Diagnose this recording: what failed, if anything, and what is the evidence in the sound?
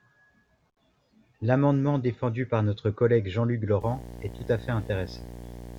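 Analogue wiring failed: video or display buzz from a screen or video cable enters the speech at 3.81 s and runs to the end. It is a 60 Hz field-rate buzz with hash above, roughly 15 dB under the voice, and shows on a spectrogram as evenly spaced harmonic lines.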